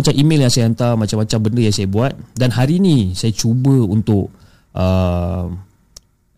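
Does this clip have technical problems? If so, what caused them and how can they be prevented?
Yes. Hard clipping affects four stretches of the speech: 0.00 to 0.94 s (overdriven by about 6 dB), 1.31 to 2.04 s (about 2 dB), 2.41 to 3.00 s (about 5 dB) and 3.40 to 4.15 s (about 1 dB). Peaks exceeding the stage's maximum are sliced flat, adding high harmonics. Unlike soft saturation's rounded warmth, the distortion appears abruptly at the ceiling. Prevent it by lowering input gain to leave headroom.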